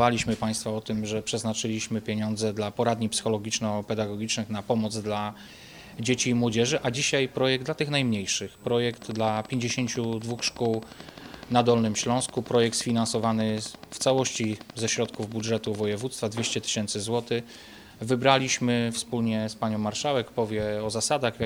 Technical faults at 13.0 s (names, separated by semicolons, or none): train of clicks